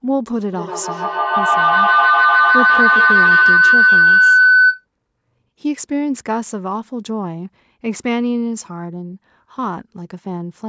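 A shrill tone of roughly 1.5 kHz swells over this speech recording from 0.53 to 4.86 s, its loop repeating about every 150 ms and peaking about 8 dB above the talker. This is feedback howl: two devices on one call share a room, so each microphone-to-loudspeaker pass adds gain.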